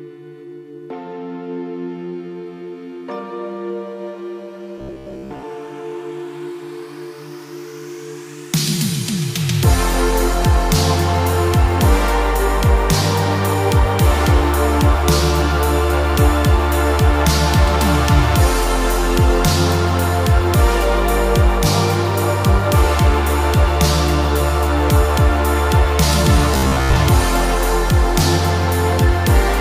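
From 4.78 to 5.44 s and again from 26.54 to 26.96 s, fresh audio likely arrived too late, so playback looped a 15 ms slice in its place. This is robotic sound from repeated short buffers: most of the sound turns into a rigid, metallic buzz at 66.7 Hz.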